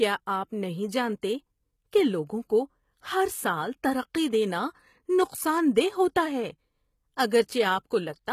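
From the start, the treble of the speech sounds bright but synthetic, with gritty, lispy s sounds and nothing above 14.9 kHz. The likely cause is HE-AAC compression at a rate that fits roughly 20 kbps. The upper band is rebuilt from copied lower harmonics rather than simply being lost, which separates this from plain low-pass dulling.

At 1.22 s a brief pre-echo appears: a hiss about 14 ms long leads into a sharp onset and softens it. Codec noise spread across the transform block bleeds ahead of the attack. Because it comes before the transient, it cannot be a reverb tail or a click.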